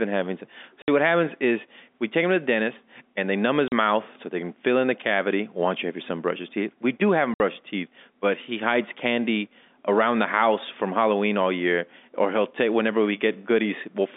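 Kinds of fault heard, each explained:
Packet loss filled with silence: lost packets were replaced by silence, leaving three hard-edged gaps of 40 to 60 ms, which fits 20 ms packets.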